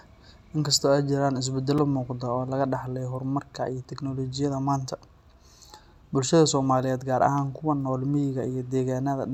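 At 1.78 s, right after "inkastoo ay jiraan", a block of digital silence about 5 ms long cuts into the speech, most likely because the output buffer wasn't filled in time. It's heard as a tick or dip; the waveform shows a flat, near-silent gap with abrupt edges, and the spectrogram a thin broadband vertical line.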